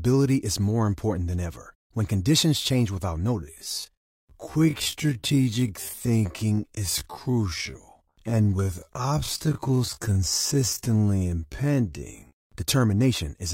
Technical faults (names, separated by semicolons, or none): time-stretched section